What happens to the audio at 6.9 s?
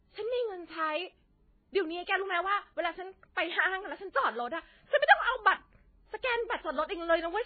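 At 6.9 s the speech sounds dull and watery, with a swirling, metallic edge on s sounds and smeared consonant attacks. Nothing reaches above 4.5 kHz, and this runs through the whole clip, not just that moment. The likely cause is heavy MP3 compression at a very low bitrate, which fits about 16 kbps: starved of bits, the encoder cuts the treble at a fixed point and zeroes quiet frequency lines that flicker on and off between frames.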